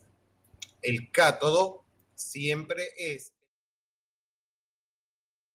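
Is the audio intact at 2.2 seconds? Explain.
No, at 2.22 s the speech suddenly drops about 4 dB in one step, a microphone volume stepped down, likely the call software cutting input gain.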